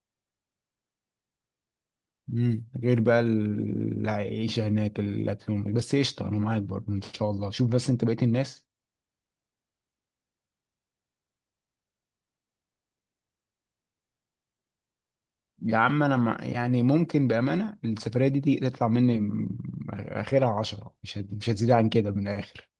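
Nothing stood out on listening to this speech recording as it came over the call link.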